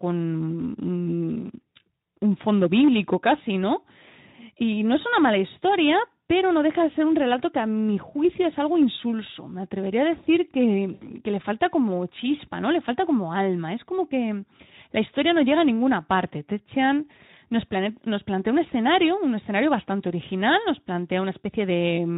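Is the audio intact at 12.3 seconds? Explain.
Yes, the audio is intact at 12.3 seconds, with no fault there, and the speech at that moment carries the light coding texture of Speex at about 15 kbps.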